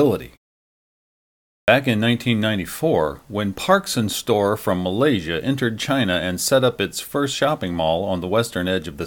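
After a pause of about 1.3 s, the output device appears to have dropped into a low-power or unlocked state and had to wake before it could play again. That produces a clipped start after a pause: from 1.59 to 1.68 s, about 90 ms of the speech is swallowed, so the next word bursts abruptly out of silence with its opening sounds missing. The quiet stretch before it is simply silent, with no fading to be heard.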